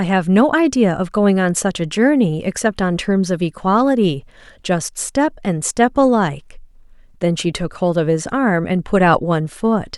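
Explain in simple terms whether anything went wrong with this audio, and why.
Nothing went wrong; no faults can be heard.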